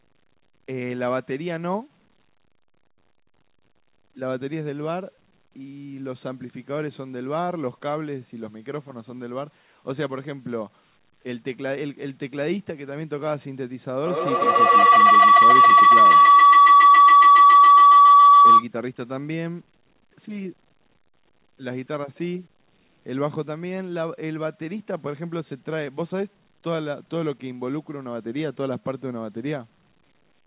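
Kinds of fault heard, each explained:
Feedback howl: 14.06 to 18.7 s, a microphone-loudspeaker loop gains level each trip, building a 1 kHz-ish tone pulsing roughly every 150 ms, about 15 dB above speech.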